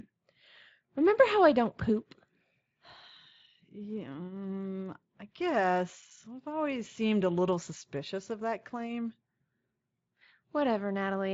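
No technical faults occur at any point in the speech, so there is nothing to describe in time order.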